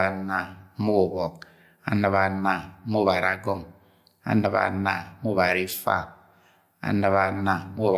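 Nothing technical goes wrong anywhere in the recording, so there's no fault to walk through here.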